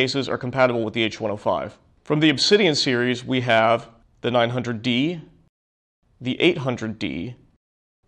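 No technical faults can be heard anywhere in the recording; the signal stays continuous and steady throughout.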